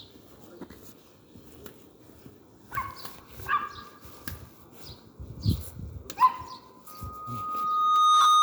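From 6.87 s to the end at 8.43 s, a loudspeaker feedback squeal builds as a microphone picks up its own loudspeaker, pushing loop gain at 1.2 kHz above one. It swells over about 1.5 s to around 15 dB above the sound, showing as a horizontal spectrogram line and a widening waveform envelope.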